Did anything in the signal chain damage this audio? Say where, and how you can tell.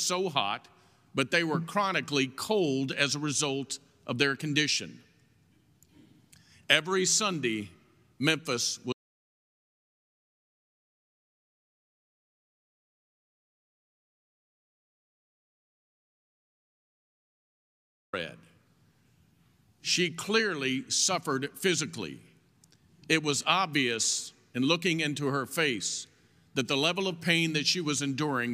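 Yes: speech cuts to total silence, no room tone, from 8.93 to 18.13 s. This audio dropout to silence likely came from an input link failing while zeros kept recording.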